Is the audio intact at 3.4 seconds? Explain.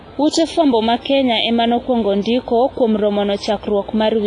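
No. At 3.4 seconds the speech carries WMA compression damage that runs through the whole clip: a ringing, washy quality with hiss that swells and fades with the voice, which fits heavy coding at a low bitrate around 24 kbps, likely from a WMA encoder. Long transform blocks smear quantisation noise over tens of milliseconds. On a spectrogram, nothing appears above 10.6 kHz and weak components show as patchy gaps; the waveform shows pre-echo before onsets.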